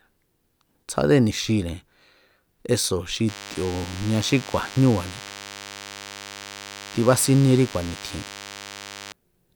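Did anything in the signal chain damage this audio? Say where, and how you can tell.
Yes, there's DECT cordless phone buzz, and it gets in at the analogue stage. Right after "eso̱ xi", at about 3.28 s, a thin, steady buzz appears under the speech and sits there until 9.12 s, roughly 15 dB below it. It repeats at 100 Hz and is full of harmonics, which is the giveaway. A nearby DECT handset or base is firing radio bursts every 10 ms, and the audio circuitry is rectifying them into the signal.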